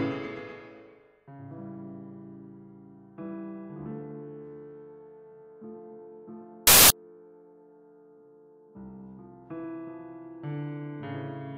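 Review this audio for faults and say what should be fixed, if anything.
From 6.67 to 6.90 s there's a burst of loud, harsh broadband noise where the samples got built from the wrong bytes. The reader misassembled each value, so the jittery low bits became the big part. Fix it by pinning down byte order and alignment in the reader.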